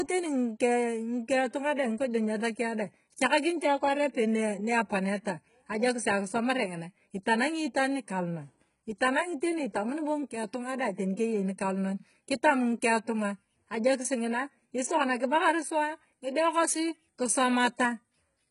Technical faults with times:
0.00-18.50 HE-AAC compression

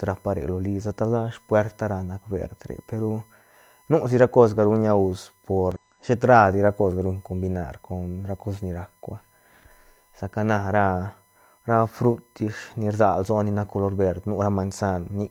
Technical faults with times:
0.00-15.31 USB whine
5.72-5.78 damaged data in a compressed stream

